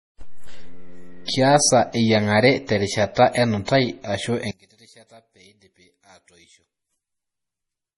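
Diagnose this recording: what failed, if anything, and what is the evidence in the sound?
Throughout, the speech sounds watery and smeared, with nothing above 11.3 kHz. This is codec damage, likely from MP3 compression at a low bitrate, around 32 kbps. Weak frequency lines drop in and out between frames, and the treble is cut at a fixed frequency.

From 3.65 to 3.68 s, a short hiss of about 25 ms comes just before a sharp attack, and the onset sounds softened. This is pre-echo from the codec. The attack fell late in a transform block, so quantisation noise spread backward into the quiet moment before it.

From 4.51 s to the end, the whole sound, background included, drops by about 30 dB to a faint residue. The likely cause is one channel inverted in the stereo path, so the shared content cancels when the channels are summed to mono and only their mismatch remains.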